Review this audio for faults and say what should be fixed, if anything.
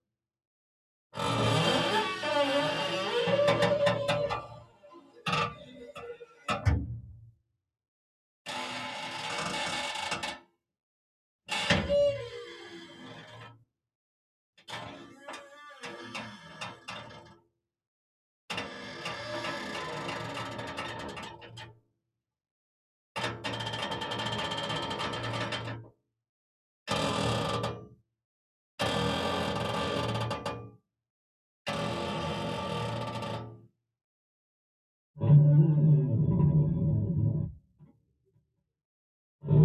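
A noise suppressor tuned for speech was left running on this sound recording. It reads steady tones, ambience and decaying tails as noise and pulls them down, while sharp attacks mostly pass, so the level swings by around 10 dB over the whole clip. The result is a pumping, fluttering or thinning quality instead of a stable level. Fix: bypass the speech noise suppressor, or switch it to a music or original-sound mode, for non-speech material.

At eight points the noise suppressor cut sound harder than elsewhere, with drops of about 21 to 22 dB: 4.41 to 6.48 s (roughly two seconds affected), 7.17 to 7.57 s, 13.54 to 13.72 s, 17.23 to 17.59 s, 21.35 to 22.09 s, 25.83 to 26.11 s, 27.92 to 28.14 s, and 37.48 to 38.69 s (about one second affected). Here sustained or fading sound sinks or has its decay cut off early. Fix: disable the suppressor on the capture path, so it cannot classify wanted sound as noise.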